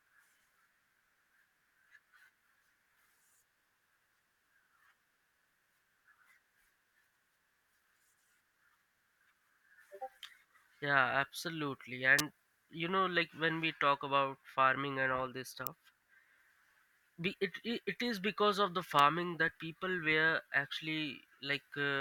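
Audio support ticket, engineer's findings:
Electrical switching spikes: three sharp snaps over the speech, at 12.19 s before "you know like when", 15.67 s after "farming and all this", and 18.99 s after "is because of the". Peaks around -10 to -15 dBFS. Likely a nearby switch or motor arcing into the line.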